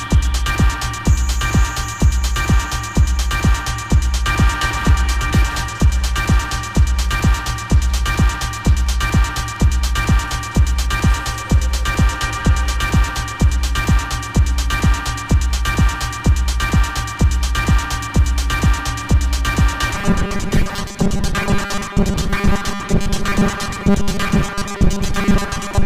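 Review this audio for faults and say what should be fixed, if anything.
Robotic sound from repeated short buffers runs from 19.95 s to the end of the clip at 25.86 s. From that point the sound becomes a rigid, metallic buzz that only roughly tracks the original. The likely cause is new audio arriving too slowly, so playback keeps looping the last tiny slice while the real signal is dropped. The buzz sits at 200 Hz, which fits a 5 ms slice being repeated, and repeats fill most of that stretch, roughly two-thirds or more. To prevent it, give the audio path enough buffering and scheduling priority that new audio always arrives before the previous block runs out.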